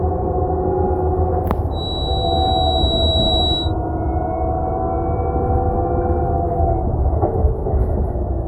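From 1.70 to 3.74 s a feedback whistle sits behind the sound: a thin, steady tone at 3.9 kHz, a few decibels below the main signal, swelling and fading slowly in level. The likely cause is a loudspeaker-to-microphone loop held just at the edge of feedback, sustaining one frequency without building up. On a spectrogram it shows as a single bright horizontal line at 3.9 kHz across those two seconds.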